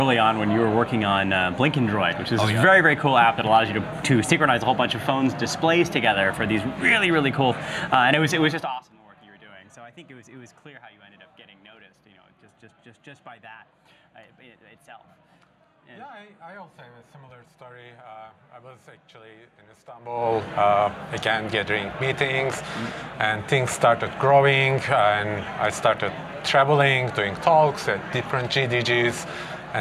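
From 8.44 to 8.91 s the level falls about 25 dB in 1 dB steps. There are roughly a hundred steps a second, with no smoothing. Each step clicks, so zipper noise ticks through the fade. It returns from 19.96 to 20.33 s as the level climbs about 25 dB.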